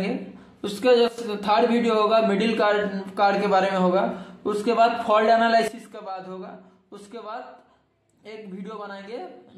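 At 1.08 s the level drops about 12 dB until 1.18 s, then from 5.68 s about 15 dB to the end: a sudden gain jump, likely an unramped digital gain change, showing as abrupt waveform steps.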